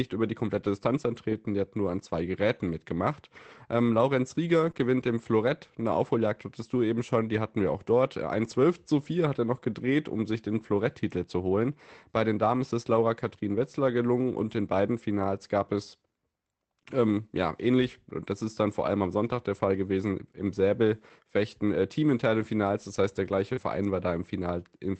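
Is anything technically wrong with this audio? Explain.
Yes. Over a WebRTC-style call path, whose Opus coding limits the audio to about 8 kHz, which fits a rate around 24 kbps, the speech shows two related kinds of packet-loss repair.

Lost packet rebuilt from error correction: at 0.57 s (after "über die"), 4.67 s, 4.75 s, 8.41–8.51 s (after "hatten wir auch dort"), 22.37–22.43 s and 23.57 s. Each missing packet was replaced by a low-bitrate copy carried in the next one, so there's no gap. Those 20 to 60 ms turn briefly rougher and noisier while still following the actual speech.

Short concealed packet loss: at 4.71–4.75 s and 23.53–23.59 s (after "heißt der"). About 20 ms and 40 ms never arrived, so the decoder extended the preceding sound and then blended back in. It comes across as a smear or wobble rather than roughness, because nothing real was decoded there.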